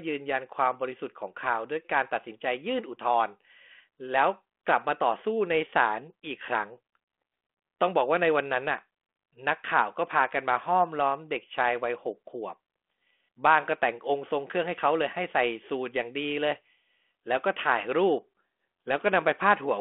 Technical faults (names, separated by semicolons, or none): none